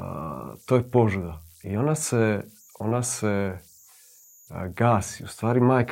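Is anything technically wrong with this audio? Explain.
Yes. Converter idle tones run through the whole clip. The converter has no dither, so small inputs fall into repeating bit patterns. These make a faint whistle around 7 kHz, about 33 dB below the speech. It shows in pauses and adds grain under quiet passages.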